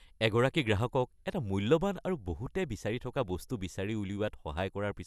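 No technical faults can be heard anywhere in this recording.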